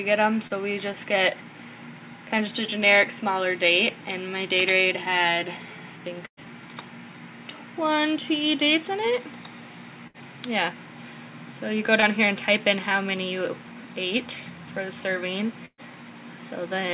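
At 0.47 to 0.53 s there is a short concealed packet loss. About 30 ms never arrived in time. The receiver extended the preceding sound to cover it, so a brief smear or wobble is heard. A burst of packet loss follows at 6.26 to 6.46 s. About 120 ms is gone. The fill lasts about 110 ms as a held buzz or hiss, fading into about 80 ms of silence. Another burst at 10.07 to 10.17 s drops about 60 ms, bridged by 68 ms of decaying fill. At 12.00 to 12.05 s a second short concealed loss replaces about 30 ms with a 24 ms patch, heard as a small wobble. The last burst, at 15.65 to 15.81 s, loses about 120 ms. It is covered by 124 ms of fading continuation and then about 50 ms of silence. After each burst the audio resumes further on, with the gap's content missing. Throughout, the call codec's band limit is audible, with nothing above 4 kHz.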